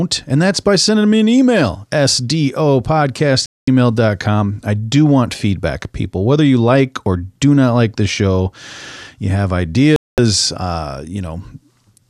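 The receiver lost the digital signal or had frames fail their checksum twice in this speech clip and muted until clean frames returned, a digital broadcast dropout. The sound cuts to silence for about 0.22 s at 3.46 s and again at 9.96 s, consistent with nine lost frames each time.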